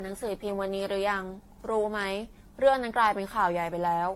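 From start to finish the speech carries a swirly, hollow smear, with consonant onsets blurred and a watery texture behind the voice, more degraded than a single 64 kbit/s AAC-LC encode would sound. This is generation loss, likely from the audio being decoded and re-encoded about five times, each pass requantising on a shifted frame grid so errors pile up. A spectrogram shows a hard ceiling near 16.6 kHz, speckled spectral holes and smeared transients.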